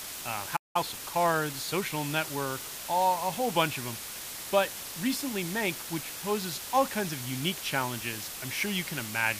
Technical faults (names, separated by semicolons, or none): low bit depth with dither; playback stall; time-compressed catch-up